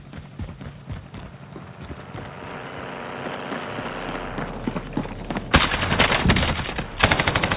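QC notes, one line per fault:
No faults are heard anywhere in the clip. The audio has come over a WebRTC call path using G.711 mu-law at 64 kbps, so it is band-limited, with nothing above 4 kHz.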